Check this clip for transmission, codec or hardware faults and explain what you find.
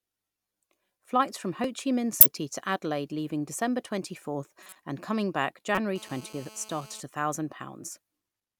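Three kinds of fault are present: a single repeated buffer, three corrupt-frame events, and a stretch of GSM phone buzz.

Repeated buffer, at 1.64 s. The playback device did not receive fresh audio in time and played its last block once more. The repeated piece is only 1.33 ms long, which fits a 64-sample buffer, and nothing is lost from the speech. A span that short cannot register as a stutter. It comes across as a single small click at the hard join where the duplicated block meets the continuing signal.

Corrupt frame decoded, at 2.19–2.26 s, 4.62–4.76 s and 5.75–5.78 s. In each case flipped bits inside compressed frames were decoded as though valid, so wrong gain values and misread codes placed energy at frequencies the speech never had. The first event spans about two frames, the second about four and the last a single frame. Each is a brief artificial blip or chirp-like burst laid over the speech, and the 4.62 s event lasts longest.

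GSM phone buzz, from 5.96 to 7.00 s. A nearby 2G handset in an active call transmits in bursts about 217 times per second, and the audio circuitry rectifies those radio pulses into the signal path. The result is a hard, raspy buzz at 217 Hz, thick with harmonics and unrelated to the speech. It sits steadily at about 19 dB below the speech level for just over a second.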